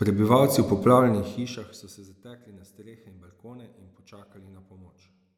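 From 0.92 s to 2.16 s, zipper noise rides on the speech. The level falls by about 25 dB in unsmoothed 1 dB steps, roughly thirty per second. Each jump leaves a tiny click, so the fade sounds like fast ticking.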